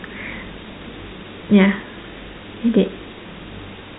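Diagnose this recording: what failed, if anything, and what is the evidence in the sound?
Nothing stood out on listening to this telephone-band speech recording, with no fault at any stage worth diagnosing.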